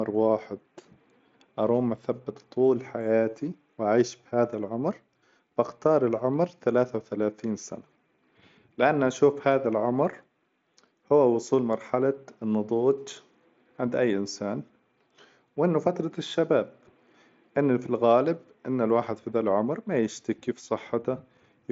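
There are no technical faults to describe in this speech clip, so there is nothing to place in time order.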